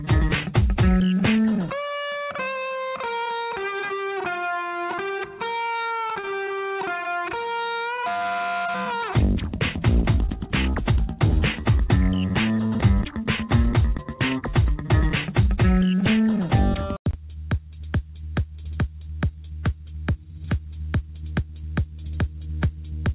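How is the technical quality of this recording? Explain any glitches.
The recording carries narrowband, call-quality audio with nothing above 4 kHz, which fits telephone-style coding such as G.711. It has one glitch.

From 5.66 to 6.29 s there is repeated packet loss, giving a robotic sound. Six short holes follow in quick succession, the longest 38 ms. Each is patched by stretching the preceding sound, so roughly a fifth of that stretch is synthetic fill, and a little is simply gone. The result is choppy, with pieces missing. Unlike a buffer underrun, the gaps are filled with continued sound rather than left silent, and unlike a single dropout, they come in a rapid cluster.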